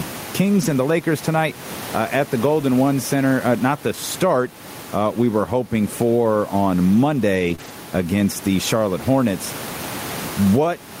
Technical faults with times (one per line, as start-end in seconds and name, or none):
0.00-11.00 gain pumping
0.57-0.67 lost packet rebuilt from error correction
7.35-7.70 lost packet rebuilt from error correction
7.55-7.60 short concealed packet loss